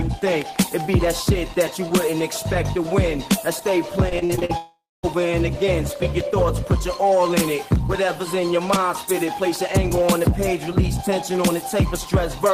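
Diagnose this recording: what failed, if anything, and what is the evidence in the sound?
Repeated packet loss (robotic sound) from 4.09 to 4.51 s, a network-stage fault. Six short holes fall inside this span, the longest 40 ms, and together they remove about 160 ms of audio. The receiver's concealment bridges each hole by extending the last fragment it received, so more than a third of the span is synthetic fill. The rapid alternation of real and extended sound gives a choppy texture with pieces missing.

A long network dropout runs from 4.57 to 5.05 s, just after the choppy stretch. Roughly half a second of audio never plays. The gap is filled first by a continuation of the last sound that decays as a buzz or hiss, and then by about 230 ms of silence before the sound resumes, with the lost portion skipped. This is likely a network outage in which no packets reached the receiver for that interval.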